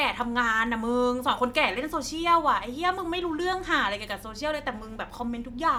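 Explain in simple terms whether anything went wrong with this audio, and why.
Nothing went wrong here: the speech comes through steadily the whole way, with no audible glitches, dropouts or odd noises to point to.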